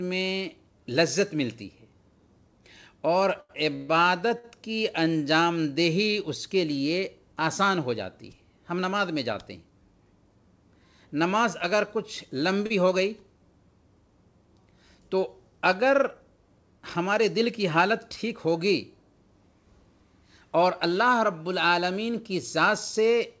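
The audio passes through a call codec that leaves nothing above 8 kHz, consistent with wideband G.722. Repeated stalls (stutter) run from 3.34 to 4.45 s: packets arrived late four times, the jitter buffer emptied, and the receiver held the last sound for about 274 ms in total, with the longest gap lasting 131 ms. A short stall from a late packet occurs at 12.66 to 12.72 s, where the buffer ran dry and the preceding sound was stretched by 37 ms before playback resumed.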